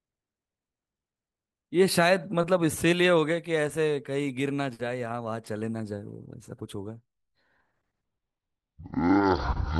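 Speech, with a stereo read as mono fault from 8.04 s to the end at 9.80 s: the player takes interleaved left and right samples and plays them one after another as a single channel. Each moment is then stretched across twice as many samples, so the speech runs at half speed and drops a full octave, 12 semitones lower. A fainter mirror image of the sound also appears in the upper half of the spectrum.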